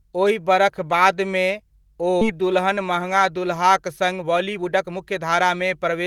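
Skip ahead at 2.21 to 2.23 s: about a second of speech was dropped while later audio waited, so playback jumps forward with no fill between the joined sides.

Jitter buffer speed-up from 3.86 to 6.06 s: an overfull buffer was trimmed by removing short pitch-period pieces, roughly 0.4 s in total, so speech runs at 117% speed, hurried but unchanged in pitch.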